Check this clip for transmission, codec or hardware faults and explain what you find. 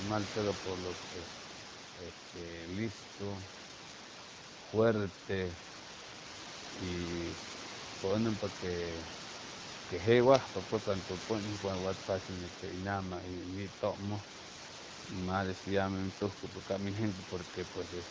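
Nothing here points to a transmission, codec or hardware problem; the room's background sits about 14 dB under the speech, and the band tops out at 8 kHz as a call's microphone path leaves it.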